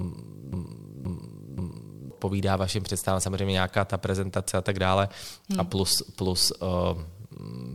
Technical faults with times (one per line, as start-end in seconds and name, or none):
0.00-2.10 broken-record loop